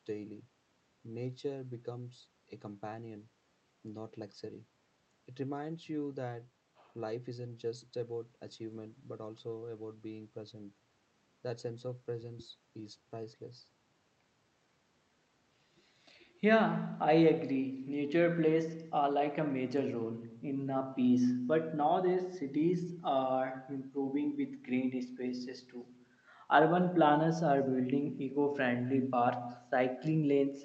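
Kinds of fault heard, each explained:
Echo with no canceller: Throughout the speech, each phrase is trailed roughly a fifth of a second later by a faint, thinner copy, about 22 dB below the direct sound. The far end's loudspeaker feeds its microphone and nothing subtracts it, so the talker's own voice returns after the network round trip. On a spectrogram every syllable has a weak ghost offset in time; the waveform shows small delayed bumps filling the gaps after phrases.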